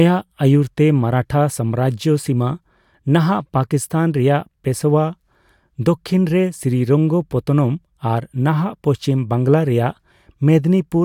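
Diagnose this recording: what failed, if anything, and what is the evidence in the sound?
Nothing failed; no stage shows any audible fault.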